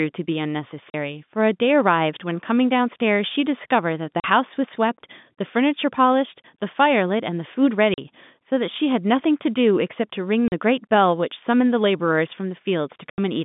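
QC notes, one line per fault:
0.90–13.18 s: packet loss filled with silence at 0.90, 4.20, 6.43, 7.94, 10.48 and 13.10 s. Mostly 40 ms holes, with 20 ms at 6.43 s and 80 ms at 13.10 s, which fits 20 ms packets. Silence replaces the lost audio, so the holes have hard edges against the narrowband telephone sound.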